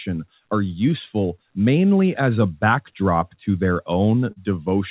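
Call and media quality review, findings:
Short concealed packet loss, 4.32 to 4.38 s, near the end of the clip. Brief smear in the speech. About 40 ms missing, likely dropped or late packets in the jitter buffer path; decoder extended the last pitch or noise, then crossfaded back. Spectrogram: harmonics stretched flat, fine detail gone. Waveform: repeated cycles, smooth blend out. Narrowband call path, nothing above 4 kHz, fits G.711 A-law at 64 kbps.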